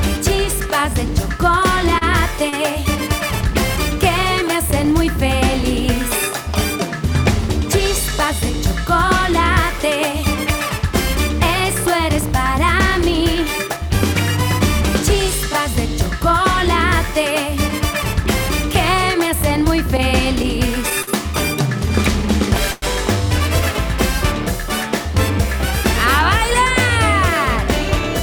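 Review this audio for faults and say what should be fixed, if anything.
Repeated stalls (stutter) occur from 1.93 to 2.54 s and from 19.97 to 21.09 s. The first stretch has three short gaps totalling 70 ms, the longest 31 ms. The second has four gaps totalling 85 ms, the longest 48 ms. Each gap is filled by continuing the last sound, so nothing is lost, but the audio drags and hiccups. This is the jitter buffer repeatedly running empty as packets arrive late. A larger or adaptive jitter buffer would absorb this arrival variation.

A call audio freeze occurs at 22.71 to 22.84 s. About 108 ms is bridged by extending the preceding sound, with no silent stretch and nothing missing. Playback then resumes where it stopped, leaving the stream about 108 ms later than before. The likely cause is packets held up in transit long enough to empty the jitter buffer. Reducing network congestion on the path, or prioritising the audio packets, would prevent these hold-ups.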